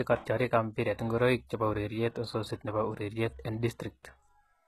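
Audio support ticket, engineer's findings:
Treble gritty and lispy on s sounds, whole clip. Top end bright but synthetic, nothing above 12.4 kHz. Likely HE-AAC compression, heavy damage. Spectral band replication copies lower bands upward under a coarse envelope, so harmonics misalign above the crossover. Fits a very low bitrate near 16 kbps, v2 mode. Request a higher-bitrate source.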